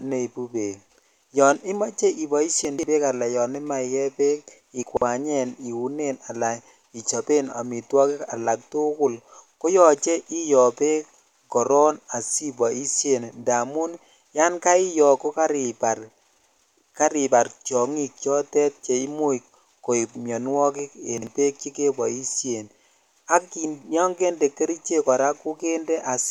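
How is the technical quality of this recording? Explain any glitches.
The recording has three brief glitches in the speech, all of the same kind.

Chunks out of order at 2.65–2.83 s, 4.83–5.02 s and 21.18–21.27 s: a 46 ms block of audio plays after the blocks that should follow it. It is three blocks late twice and one block late once. The reordering leaves hard joins, heard as a jumbled stutter.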